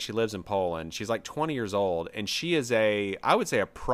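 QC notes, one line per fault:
No technical faults were found in this speech recording.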